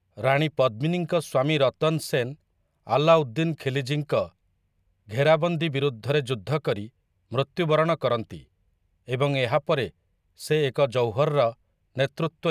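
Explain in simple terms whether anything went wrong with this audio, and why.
Nothing went wrong with this speech recording, as no technical fault can be heard anywhere in it. There are no dropouts, glitches or distortions to point to, so there is nothing here that needs explaining or fixing.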